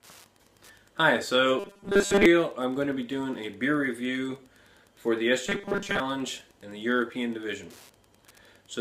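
A steady Wi-Fi interference tick runs through the whole clip, about ten clicks a second at a 102.4 ms beacon period, sitting roughly 35 dB below the sound. It shows on a spectrogram as thin, evenly spaced vertical lines across the frequency range and on a waveform as small regular spikes. From 1.60 to 2.26 s and again from 5.47 to 6.00 s the sound turns into a rigid metallic 200 Hz buzz, robotic sound from repeated short buffers, likely caused by a 5 ms chunk being replayed while most of the real audio in those spans is skipped. The waveform shows identical 5 ms cycles repeating, and the spectrogram shows a harmonic comb at multiples of 200 Hz.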